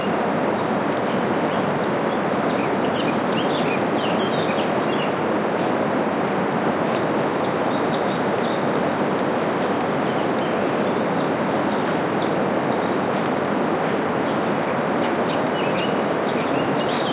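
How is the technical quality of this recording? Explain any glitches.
No glitches can be heard in this audio. It came through a WebRTC call path with nothing above 4 kHz, which fits a narrowband call codec such as G.711 mu-law at 64 kbps.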